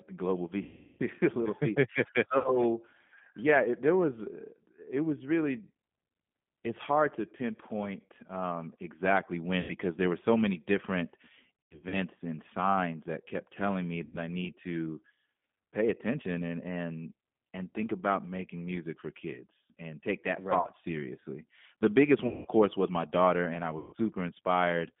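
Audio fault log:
throughout: G.729 codec. The speech is confined to roughly 150 Hz to 3.5 kHz and has a plainly rough, synthetic edge. It is rebuilt from a vocal tract filter, a pitch predictor and a few pulses per frame, which fits 8 kbit/s G.729A.
0.63–1.02, 2.38–2.57, 9.60–9.72, 11.64–11.95, 14.05–14.18, 20.61–20.67, 22.27–22.48 and 23.78–23.95 s: VoIP packet loss concealed by the speech codec. Gaps run from 30 ms up to 360 ms at 0.63 s. At 11.64 s the loss is scattered in bursts of up to 90 ms, between "were so many different" and "and signs that kept". The gap at 22.27 s ends just before "course was my daughter", and the one at 23.78 s follows "my daughter and I". The decoder stretches the last pitch and filter into a fading buzzy tone or coloured noise, and the speech stays weak briefly afterwards.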